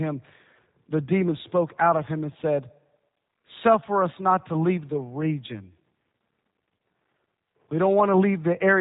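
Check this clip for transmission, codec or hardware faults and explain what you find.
There's one fault, and it runs through the whole clip: G.729 codec damage, and it's plainly audible. Nothing gets through above about 3.8 kHz, so the speech sounds boxed-in and dull. The codec doesn't send the waveform. It sends a vocal tract filter, a pitch predictor and a sparse set of pulses for each short frame, and the decoder rebuilds speech from those. That reconstruction is what gives the voice its slightly rough, synthetic edge, and the overall character fits an 8 kbit/s stream.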